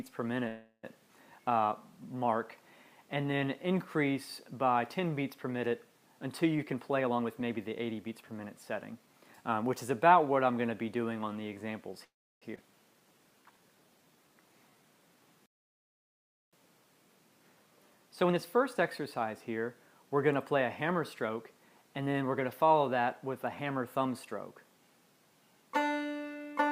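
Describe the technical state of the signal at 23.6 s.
At 23.6 s the signal is intact, with no technical fault to be heard.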